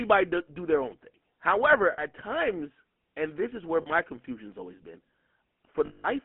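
The whole recording carries the sound of the GSM full-rate codec. Its buzzy, gravelly roughness is plainly audible throughout. The codec rebuilds speech from a vocal-tract model driven by evenly spaced pulses, and much of the fine detail is discarded. The coarseness fits a 13 kbps full-rate stream. The line band runs from 200 Hz to 3.4 kHz, so the speech sounds narrow and boxy.

Lost GSM frames then interrupt the speech three times. From 1.92 to 2.02 s, a 60 ms gap fits three missing frames. From 3.82 to 3.90 s, a 40 ms gap fits two. The decoder fills each hole by repeating the settings of the last good frame. This gives a short, rough, metallic ring in place of fresh sound. The longest loss runs from 5.86 to 6.05 s, about 180 ms. That fits nine lost frames, and the ring is held across it.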